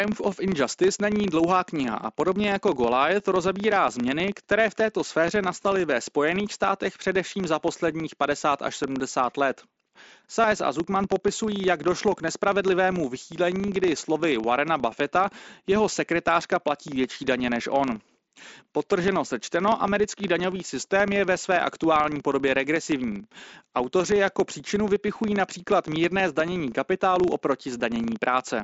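A speech recording with a filter restarted on every block, producing a 25 Hz buzz of ticks every 40 ms that follows speech level, seen as evenly spaced vertical lines on a spectrogram and small spikes in the waveform. At 10.41 to 10.44 s, concealed Bluetooth headset packet loss fills a gap of about 22.5 ms, likely about three lost frames, with a short repeated stretch that is flat and looped in the waveform and briefly buzzy, ending in a slight warble. The mSBC headset path caps the audio near 8 kHz.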